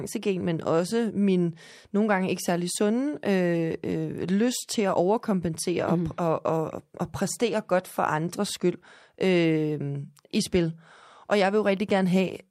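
A repeated buffer occurs at 5.54 s in this speech clip. Fresh audio failed to reach the playback device in time, so it played its most recent block a second time. That block lasts about 5.3 ms, which fits a 256-sample buffer. The fragment sounds twice with a hard join at the seam and displaces roughly 5 ms of the real signal. Because the repeated piece is so short, it comes across as a click or brief buzz rather than an audible stutter.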